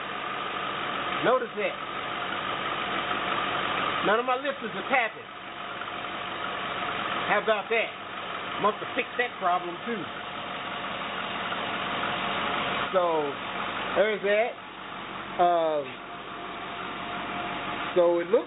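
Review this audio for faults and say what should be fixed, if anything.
Nothing here needs fixing: the audio has the narrowband character of a G.711 A-law call path at 64 kbps, with content stopping at 4 kHz, and no faults can be heard.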